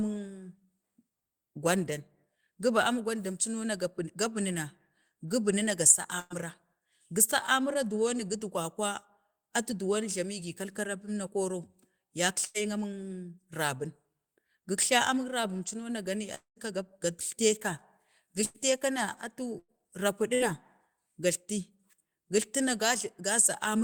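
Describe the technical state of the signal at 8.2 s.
At 8.2 s the speech signal is intact, with no technical fault present at that moment.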